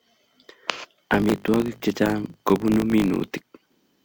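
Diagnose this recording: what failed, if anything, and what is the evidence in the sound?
A filter restarted on every block, in the call-processing stage. A steady buzz at 50 Hz runs through the whole clip, riding under the speech. The buzz grows louder and quieter with the speech level. Each block, the filter drops its stored history and starts again from zero. That reset leaves a small transient at the start of every block. Repeating at 50 Hz, the transients fuse into a buzz. This rate fits 20 ms processing blocks.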